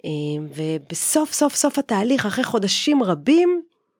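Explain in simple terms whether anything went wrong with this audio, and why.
At about 1.02 seconds, the microphone volume stepped up: the software judged the microphone too quiet and turned its input level up in a single jump. The voice and the background noise suddenly become louder together at that moment, instead of rising gradually.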